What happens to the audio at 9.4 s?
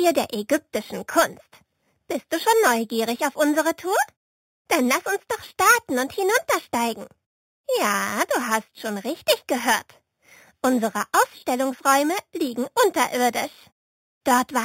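At 9.4 s you're hearing imaging from sample-and-hold upsampling, which runs through the whole clip rather than starting there. It sounds like the rate was raised by just repeating each sample with no smoothing, which fits an 8 kHz source held up to 48 kHz. That leaves a mirrored copy of the band folded into the 4 to 8 kHz range, about 13 dB down, heard as a bright metallic fizz that tracks the sound.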